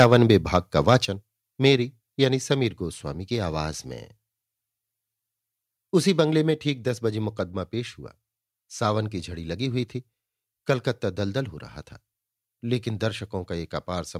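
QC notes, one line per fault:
0.00–0.57 s and 0.88–0.95 s, microphone overload: the loudest peaks of speech have their tops sheared flat, giving a harsh, crackly edge. The first stretch is driven hardest, about 7 dB past the converter's ceiling, with around one percent of samples clipped. The shorter burst near 0.9 s is only about 2 dB over but flattens twice the share, roughly two percent. The likely cause is microphone input volume set too high.
0.04 s and 1.05 s, microphone volume stepped down: speech and background both drop abruptly in a single step, by about 3 dB at 0.04 s and about 6 dB at 1.05 s. The call software likely detected clipping and pulled the device's input volume down in one move. Because the input volume changed at the source, the whole sound shifts level at once.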